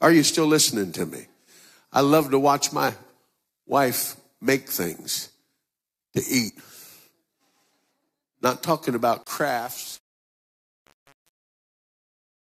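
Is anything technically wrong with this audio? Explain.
Yes. From 9.23 s to 12.5 s, right after "talking about", there's truncation distortion on a fade. The fade-out keeps too few bits with no dither, which fits something like 7-bit resolution, so the waveform collapses into coarse steps and the tail turns gritty.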